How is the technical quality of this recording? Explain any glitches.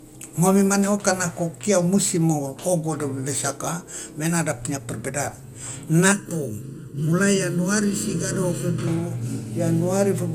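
The speech carries two audible faults: a lossy coding problem that runs through the whole clip, and a comb-filter colouring in one stretch near the end.

Generation loss, throughout: the speech sounds swirly, smeared and hollow, with blurred attacks and nothing above 17.4 kHz. This is likely from about three MP2 re-encodes near 96 kbit/s, each adding fresh quantisation noise.

Channel delay (comb filtering), 6.12 to 8.87 s: one channel lags the other by under a millisecond, and summing them cancels frequencies at evenly spaced notches, the first around 700 Hz. That leaves a hollow, phasey tone.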